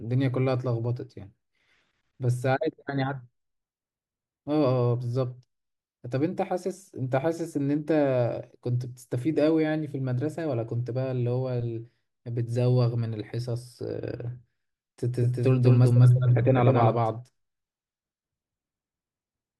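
At 15.21 s, a doubled audio track begins abruptly and runs to the end: a dry, equally loud copy trails roughly 200 ms behind, likely from a slower second capture path.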